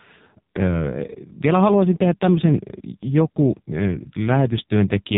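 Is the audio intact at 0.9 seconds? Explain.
No. At 0.9 s, as throughout the speech, AMR narrowband mobile codec damage is heavy: everything above 3.8 kHz is gone, and the vocal-tract model, driven by sparse pulses, makes the voice buzzy and synthetic, which fits a low mode around 5.9 kbps.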